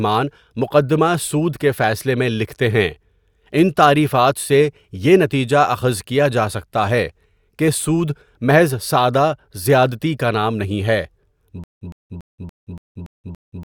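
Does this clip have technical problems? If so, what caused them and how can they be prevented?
Yes. From 11.64 s to the end, the speech breaks into a stutter with silent gaps: a 109 ms fragment repeats seven times, each followed by about 176 ms of dead silence, a 285 ms cycle. This is likely a stalled stream replaying its last buffer, so the audio meant for that stretch is lost. Larger playback buffering and a steadier network or disk supply would prevent it.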